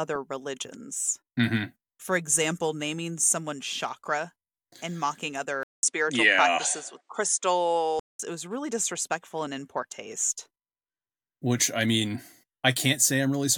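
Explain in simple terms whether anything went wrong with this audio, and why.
At 5.63 seconds the speech cuts out for about a fifth of a second, then returns duller, with nothing above 10 kHz and faint new background noise, though the loudness stays about the same. At 8.19 seconds the full, brighter sound comes back. The likely cause is an input switched to a poorer device. A simple dropout would only leave a gap, but here the tone and background change as well.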